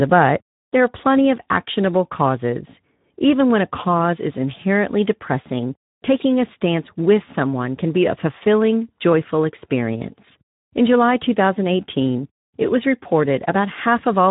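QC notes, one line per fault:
Throughout: Speex codec damage, plainly audible across the whole speech clip. Nothing reaches above about 3.8 kHz, so the sound is narrowband and muffled, consistent with an 11 kbps setting. The low bitrate leaves the CELP coder too few bits to model the excitation, and the speech comes out noisy and hoarse. A plain low-pass filter would dull the top without that grainy roughness.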